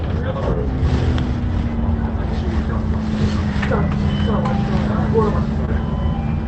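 Right near the end, from about 5.65 to 5.70 s, there's a short concealed packet loss: roughly 20 ms of audio never made it to the decoder in time, so the receiver papered over the gap by extending the last bit of sound for about 22 ms and then crossfading back into the real signal. You hear it as a quick smear or wobble.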